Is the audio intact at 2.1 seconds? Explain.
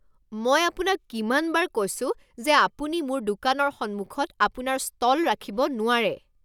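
Yes, the speech at 2.1 seconds is intact, with no dropout, glitch or other fault at that moment.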